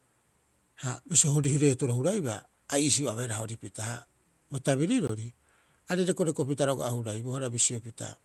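At 1.44 s a sharp tick, and at 5.07 s a longer pop with a brief hole: blocks of digital silence lasting 5.3 ms (fitting a 256-sample block) and 19 ms, likely where output buffers went unfilled, and the speech dropped abruptly to silence.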